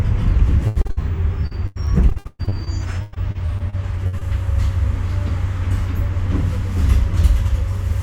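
Everyday sound here, with repeated packet loss (robotic sound) from 0.67 to 0.99 s and again from 1.47 to 4.23 s: gaps get patched by stretching the last sound, leaving it choppy with pieces missing.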